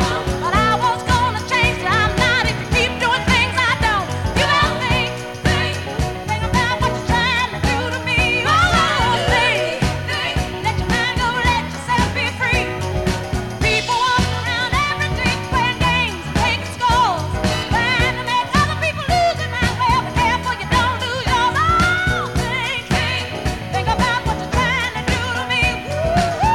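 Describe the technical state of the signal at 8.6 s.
At 8.6 s a switching supply whistle sits under the sound, as it does throughout. A power supply in audible burst mode, or beating with another, puts out a faint, wavering tone near 3.15 kHz.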